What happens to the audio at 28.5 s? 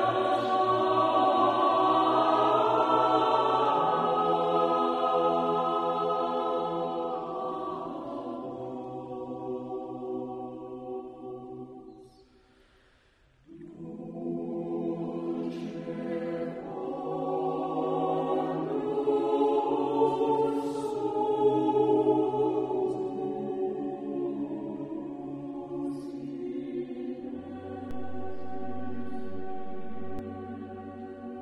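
At 28.5 s the audio sits inside a DC step running from 27.91 to 30.19 s: the waveform's zero line jumps by about -31 dBFS and holds, heard as a low thump. On a waveform the trace rides visibly off-centre; a spectrogram shows a brief broadband click at each edge.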